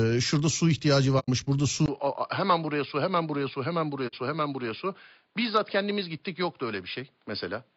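Across the whole speech clip the voice is rough and grainy, with noise between harmonics, most likely from low-delay AAC compression (AAC-ELD) at 32 kbps, where short frames resolve pitch poorly.

At 1.19 to 1.30 s, just after "şurada su ihtiyacı", AAC frame loss with muting leaves a soft-edged 90 ms hole. This fits three lost frames zeroed by the decoder and faded by overlapping windows.

From 1.86 s the input is likely switched to a poorer device. A 20 ms silence precedes the change, then the sound turns dull, with nothing above 5 kHz. The level drops about 5 dB and a new noise floor sits roughly 45 dB below the voice.

At 4.07 to 4.15 s a second muted frame loss opens a 60 ms gap, consistent with two frames dropped.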